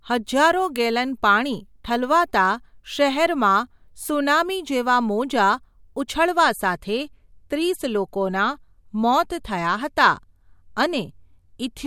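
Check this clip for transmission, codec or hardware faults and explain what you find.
One fault: from 6.2 s to the end, the speech abruptly dulls, losing everything above 13.9 kHz, with more swirly codec artefacts and no gap. This is an adaptive stream at a lower bitrate, consistent with MP3 dropping from about 128 to 64 kbit/s.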